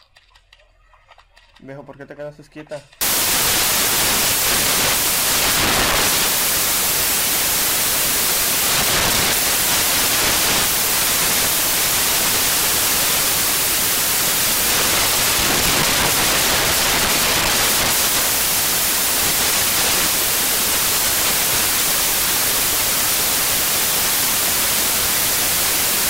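For the first 3.01 s things are clean, then at 3.01 s the samples get built from the wrong bytes and it stays that way right to the end. The reader is assembling each sample incorrectly, whether from a one-byte offset, swapped byte order or a wrong alignment assumption, so the rapidly changing low bits end up as the big part of every value. What you hear is loud, harsh broadband noise.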